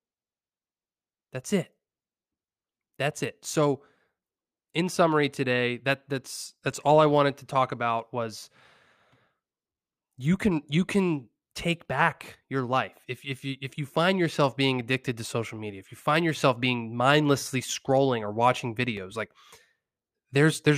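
CD scratch ticks at 1.12 to 1.78 s and 18.71 to 19.62 s, after "mindlessly scrolling or watching": ticks up to roughly 3 ms recurring evenly, once per disc revolution, unlike random vinyl crackle.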